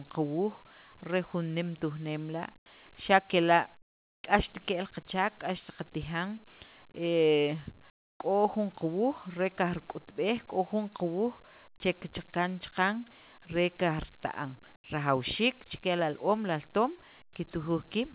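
At 2.58–2.66, 3.82–4.24, 7.9–8.2 and 14.76–14.84 s, comfort noise replaces the background in pauses, likely from discontinuous transmission. It sounds like a flat hiss about 15–25 dB quieter, and shows as a featureless, even band on the spectrogram, with a thinned waveform.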